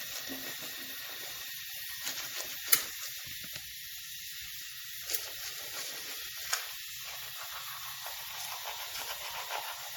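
From start to finish the audio shows MP3 compression damage, likely from an encoder short of bits, which fits a low rate of around 64 kbps. Starved of bits, the encoder discards the upper treble above a fixed cut-off and drops weaker frequency components, letting them flicker in and out between frames. The result is plainly audible throughout: the sound turns dull and watery, with a swirling, unstable texture and softened, smeared onsets.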